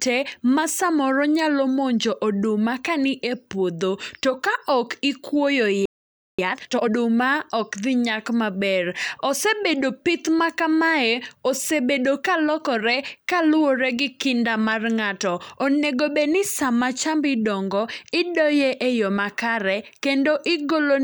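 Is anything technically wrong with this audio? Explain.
Yes, the speech breaks off and then rushes to catch up.

A playback stall from 5.86 to 6.39 s silences the output for about 0.53 s, likely from the player running dry of data. The waveform shows a flat gap.

A time-compressed catch-up from 6.39 to 6.91 s plays the backlog at 2.0x speed, splicing out short pieces at unchanged pitch. It sounds hurried, with crowded syllables in the spectrogram.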